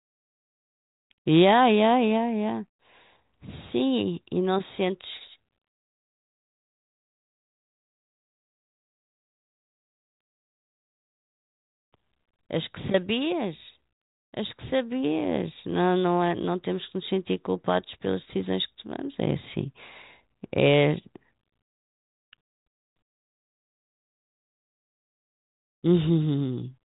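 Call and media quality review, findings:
No faults found: speech carried over a G.726 ADPCM path at 40 kbit/s, band-limited to about 3.8 kHz as expected for that codec, with coding noise faint at most.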